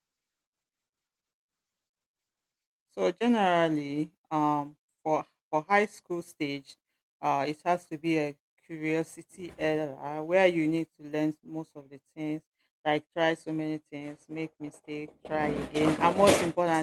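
No technical faults are audible in this speech.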